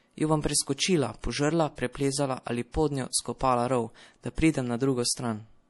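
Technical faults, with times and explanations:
Throughout, MP3 compression: the encoder is starved of bits, at a rate that fits about 48 kbps, so it discards everything above 11.5 kHz and zeroes weak spectral lines frame by frame. The speech sounds dull, watery and swirly, with plainly audible damage on sibilants, likely from this low-bitrate encoding.
1.20–1.24 s and 2.72–2.74 s, pre-echo: a sharp onset fell late in a transform block, and quantisation noise meant for the loud part spread back into the quiet just before it, over about 32 ms and 26 ms. Each attack is led by a brief hiss and sounds smeared.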